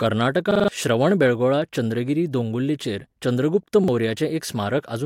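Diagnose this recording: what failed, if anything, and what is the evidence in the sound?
Repeated buffer at 0.51–0.68 s, just before "श्रवणबेळगोळा चंद्रगिरी दोंगुल्लेचेर चंद्रगुप्त", and at 3.84–3.88 s, right after it. New speech reached the driver's buffer late, so the device replayed its last 43 ms piece four extra times, then once, with hard joins. About 150 ms and 40 ms were lost. The 43 ms piece fits a 2048-sample buffer.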